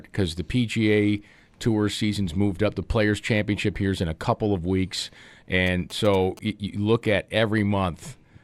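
From 5.67 to 6.39 s, between "a couple of weeks" and "you look at", a galloping dit-dit-dit of short 217 Hz buzzes sits about 20 dB below the speech. These are GSM signalling bursts: a nearby 2G phone's brief radio bursts, rectified by the audio circuitry.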